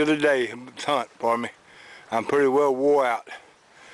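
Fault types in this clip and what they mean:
No faults can be heard anywhere in this clip.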